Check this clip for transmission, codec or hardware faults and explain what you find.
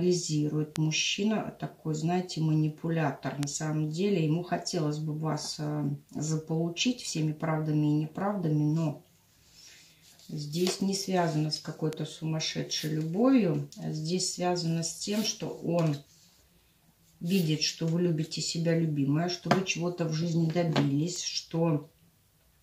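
Four bit error spikes occur, at 0.76, 3.43, 11.93 and 21.16 s. Each is a single flipped bit that throws three samples (one at 21.16 s) up by a power of two to about −12 or −18 dBFS before snapping back. The result is an isolated broadband tick unrelated to the sound. Unlike a dropout click, nothing goes missing around it.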